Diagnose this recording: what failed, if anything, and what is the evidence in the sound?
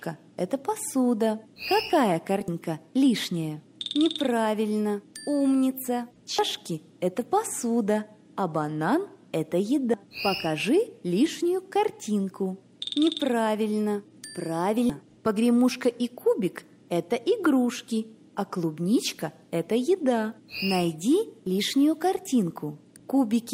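The codec stage failed: damaged data in a compressed stream left corrupt frames that the decoder misread before resyncing at the next header. Each is a brief chirp or blip: 2.48–2.51, 6.38–6.42, 9.94, 14.90 and 22.96–22.99 s.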